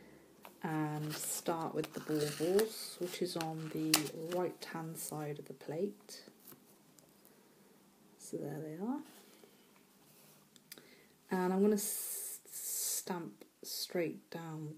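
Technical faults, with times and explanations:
No technical faults detected anywhere in the audio.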